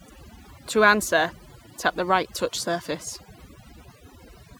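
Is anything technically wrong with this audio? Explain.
Yes, there's overdone noise removal running through the whole clip. The denoiser was clearly set far too aggressively: any frequency band sitting close to its idea of the noise floor gets pulled way down or switched off entirely, and the quieter parts of the speech get caught along with it. So between phrases the background drops and breaks up into little twinkly specks.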